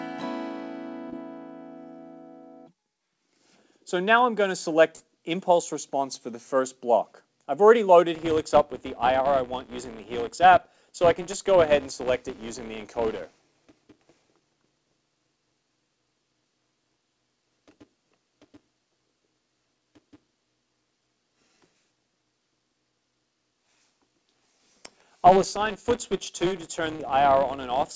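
The audio arrived over a call link whose band stops at 8 kHz, which fits a wideband G.722 path at around 64 kbps. It shows three short concealed packet losses, at 1.10 to 1.14 s (20 ms missing), 4.96 to 5.02 s (40 ms) and 26.96 to 27.01 s (40 ms). Each time, audio failed to reach the decoder in time, and the receiver extended the preceding sound and then blended back into real signal. The patches are heard as brief smears or wobbles.

From 8.15 s to the end, a filter restarted on every block produces a regular buzz at 188 Hz. Because the filter discards its state at each block boundary, it begins every block with a small transient. The 188 Hz repetition rate fits a 256-sample block, and the buzz rises and falls with the level of the signal, as these start-up transients scale with whatever passes through the filter.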